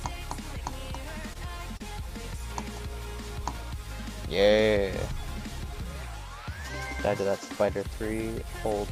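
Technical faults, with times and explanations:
Throughout: computer activity noise. A faint buzz pulsing around 100 times a second sits roughly 35 dB below the sound. Processor or graphics load shifts the shared ground.
1.33–1.37 s and 1.77–1.82 s: short stall from a late packet. A packet arrived late, so the receiver held the last sound for 18 ms, then 30 ms. Nothing is lost, but the sound briefly hangs with a slight buzz or dip.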